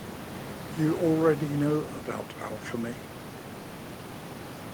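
No technical faults are audible.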